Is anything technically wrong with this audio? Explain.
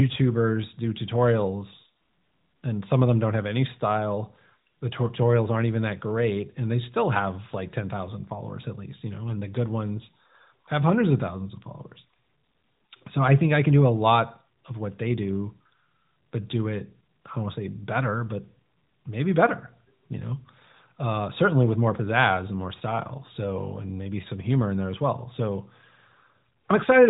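No, nothing is technically wrong with this audio.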